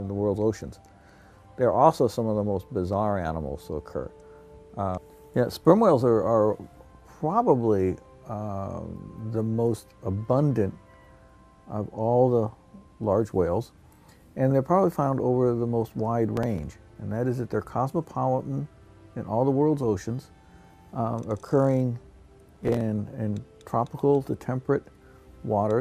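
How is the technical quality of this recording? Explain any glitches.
There are two short bursts of processor overload crackle, one from 16.34 to 16.74 s and another from 22.44 to 22.81 s. In both, the processor fell behind on very short buffers, under a millisecond each, so blocks were skipped outright and left tiny hard-edged gaps. Strung together, they come across as gritty tearing over the sound. The second burst is slightly shorter but packs in roughly twice as many misses.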